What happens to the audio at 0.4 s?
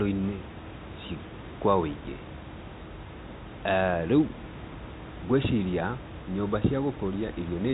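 Nothing goes wrong at 0.4 s: the speech carries on intact, with only the room noise about 14 dB beneath it and the narrow telephone band of the G.711 coding, which passes nothing above about 3.8 kHz.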